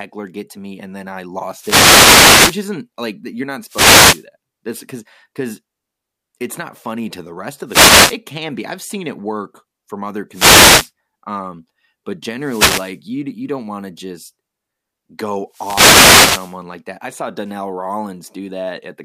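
The radio link from an analogue FM wireless microphone repeatedly fades as reflected paths cancel, so receiver noise surges over the speech in wireless microphone noise hits: 1.53–2.69 s, 3.66–4.26 s after "like you're not", 7.66–8.18 s between "funny to the rest" and "can be I've seen", 10.30–10.91 s between "it work from other" and "um but", 12.38–12.99 s, and 15.49–16.59 s. Each is heard as a brief swish or burst of static.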